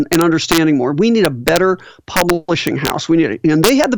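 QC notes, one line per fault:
0.13–0.58 s, 1.25–1.57 s, 2.17–2.30 s, 2.67–2.90 s and 3.64–3.84 s: integer overflow. Speech peaks driven about 2 to 4 dB past full scale wrap to the opposite sign instead of limiting, so each overshooting peak jumps across the whole range and lands as a violent crack, harsher than clipping.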